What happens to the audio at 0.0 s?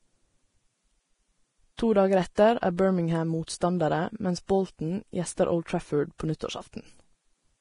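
From the very start, the speech is hissy and grainy, and it stays that way throughout. Nothing is heard above 10.6 kHz. This is likely heavy Vorbis compression at a low bitrate near 29 kbps. Its coarsely quantised treble turns fine detail into noise, roughens tones and blurs attacks.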